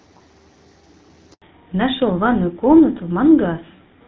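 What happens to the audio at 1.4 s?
A handover gap silences the audio from 1.34 to 1.42 s: no speech frames arrive for 80 ms while the call switches networks, so the voice dies away within a few tens of milliseconds and stays silent until the new link starts. From 1.42 s to the end, a fallback to narrowband removes everything above 4 kHz, leaving the speech duller and rougher. This points to a drop from wideband AMR-WB to the older GSM full-rate codec.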